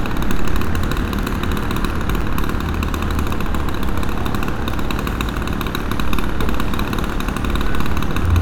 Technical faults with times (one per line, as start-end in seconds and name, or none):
2.21 gap between stream segments